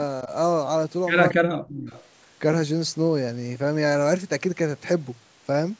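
From 1.29 to 1.33 s, and again from 1.95 to 2.07 s, an echo leak brings back a faint, delayed copy of the speech, about 20 dB and then about 30 dB below it. The consistent 229 ms lag sets it apart from room reverberation, and the likely cause is a loudspeaker echo that the far end's canceller failed to remove. Between 1.32 and 1.95 s comes speech suppressed in double talk. The talker's speech sinks by as much as roughly 40 dB and drops out in patches over about half a second. This is a gated loss during overlapping talk, not a steady fade. It is likely the canceller muting both talkers when it could not separate them.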